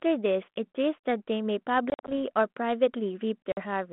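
Packet loss on an ADPCM call leaves hard silent holes totalling 110 ms across 1.9–2.19 s, then a 50 ms gap at 3.52 s. The decoder's predictor desynchronises, so audio resumes slightly distorted before settling.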